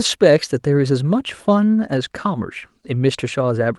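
There are no technical faults to describe in this speech clip, so there is nothing to place in time order.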